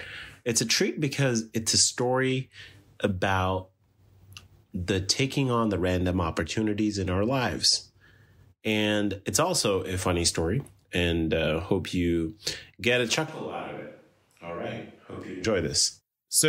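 Switch to a distant microphone, 13.28 to 15.45 s, after "hope you get a": the close mic likely dropped out, so speech turns abruptly hollow, thinner, about 10 dB quieter and noisier.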